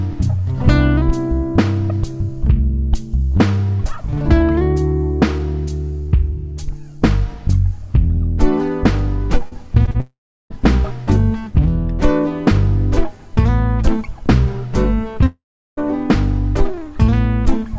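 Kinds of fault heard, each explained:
Short concealed packet loss: Brief gaps where audio packets arrived too late or not at all, and the receiver covered each hole by extending the preceding sound before crossfading back into the real signal. Three occur in quick succession: at 9.48 s, about 40 ms is lost; at 9.86 s, about 20 ms; and at 9.91 s, another 40 ms. Each is heard as a short smear or wobble rather than a clean cut.
Long network dropout: Two half-second holes in the audio, the likely result of the network delivering nothing for that stretch. From 10.00 to 10.52 s and from 15.26 to 15.79 s, the last sound continues briefly as a fading buzz or hiss, then falls to silence for roughly 0.36 s and 0.38 s respectively. The audio then resumes with the missing portion simply gone. The first follows directly on the cluster of short losses.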